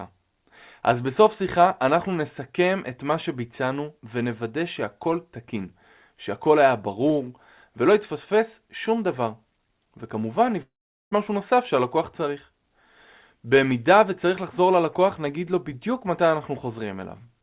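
From 10.62 to 11.13 s, a long network dropout is the likely cause: about 0.5 s of audio never arrived. The receiver extends the last sound into a fading buzz, then about 0.41 s of near-silence follows before the speech resumes without the lost part.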